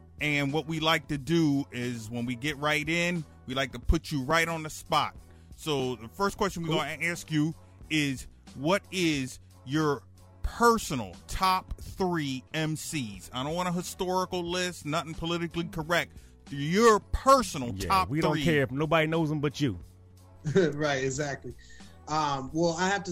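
From 4.31 to 9.28 s, periodic USB or driver dropouts skip a couple of milliseconds every 0.5 s, giving evenly spaced ticks, unlike random clicks.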